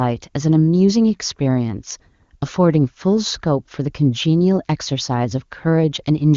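No technical faults can be heard in this speech clip. It passes through the AMR wideband (HD Voice) codec, whose band-limited, wideband character fits one of its higher rates, around 23.85 kbit/s.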